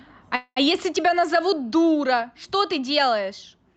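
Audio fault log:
0.35–0.58 s, call audio freeze: a fading buzz, then brief silence, likely an emptied jitter buffer; speech resumes intact. The spectrogram shows smeared bands, then a blank gap.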